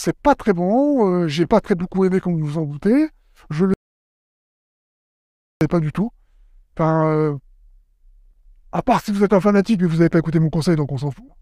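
At 3.74 s the sound cuts off abruptly into an audio dropout to silence lasting about 1.87 s, until 5.61 s. Not even room tone remains, so the input was likely lost while silence kept being written. A waveform shows a flat line, a spectrogram a blank band.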